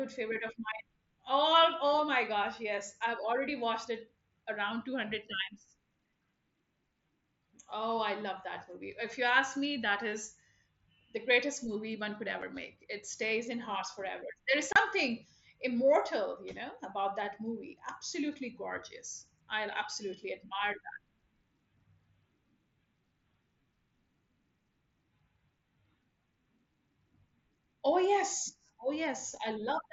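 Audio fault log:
12.42 s and 14.73–14.76 s, unconcealed Bluetooth headset packet loss: The sound drops out twice with hard edges. The first hole comes right after "greatest movie one could" and lasts about 7.5 ms, which fits a single lost headset frame. The second lasts 30 ms, a longer gap, which fits a few consecutive lost frames. Nothing fills the missing audio, so it abruptly stops and restarts. This is heard over the light graininess of the mSBC wideband link.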